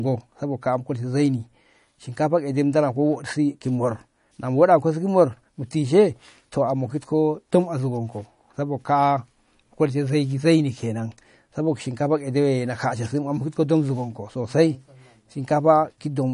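From start to finish the speech has a watery, swirly edge, and nothing comes through above 10.6 kHz. That's likely MP3 compression at a low bitrate, something like 40 kbps, with the encoder chopping the top end and letting weak detail flicker between frames.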